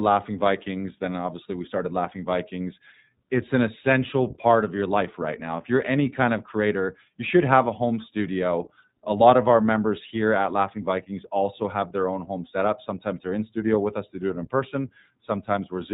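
A speech clip coded with the iLBC codec from start to end. Nothing above 4 kHz survives. The codec damage is plainly audible as a rough, synthetic texture. Each frame's excitation is coded independently, which fits 20 ms frames at 15.2 kbps.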